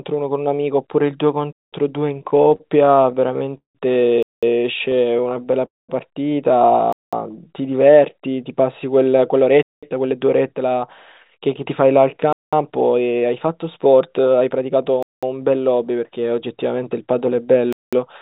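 Speech carried over a narrowband call link, with nothing above 4 kHz, consistent with G.711 A-law, and it has several delivery faults. Gap between chunks: the audio was handled in 2.5 s chunks and each join was left with 200 ms of silence, so hard-edged holes cut in at 1.53, 4.23, 6.93, 9.63, 12.33, 15.03 and 17.73 s, every 2.7 s. Repeated stalls (stutter): packets kept arriving late, so the jitter buffer emptied again and again and the receiver stretched the last sound to cover each wait. From 2.14 to 3.77 s this happened 20 times, about 0.4 s in total and up to 171 ms at once, making the speech drag and stutter; from 4.79 to 5.63 s nine brief stalls of up to 10 ms add a light judder. Call audio freeze: from 5.65 to 5.91 s the stream halts, likely because packets were held up in transit and the buffer ran dry, leaving a fading continuation and then 190 ms of silence before speech resumes where it stopped. 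Jitter buffer slow-down: with the buffer running low, the receiver repeated pitch periods to rebuild a reserve, so 7.31 to 7.61 s plays at 90% speed with unchanged pitch, stretched by 41 ms. Jitter buffer speed-up: an overfull buffer made the receiver cut tiny pitch-period slices, so 9.34 to 10.82 s runs at 109% (about a tenth of a second removed) and 11.30 to 15.57 s at 108% (roughly 0.3 s removed), sounding hurried at normal pitch.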